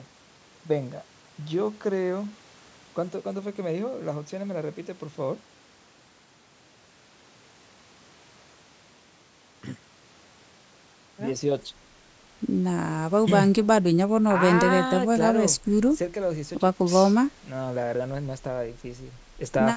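There are no technical faults in this speech clip to describe.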